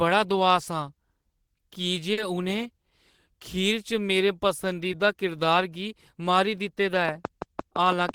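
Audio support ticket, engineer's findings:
Short concealed packet loss at 2.13 to 2.18 s and 4.92 to 4.94 s. About 40 ms, then 10 ms, of speech never arrived in time. The decoder extended the preceding sound and crossfaded back, leaving a brief smear or wobble.

Train of clicks from 7.09 s to 8.15 s. Regular pulses near 6 per second, peaking around 10 dB above the speech, audible between and over syllables. Likely interference from nearby equipment or a faulty connection or power supply.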